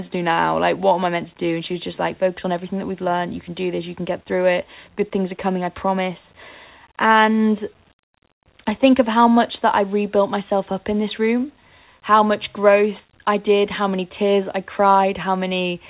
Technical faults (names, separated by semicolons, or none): loudspeaker feedback squeal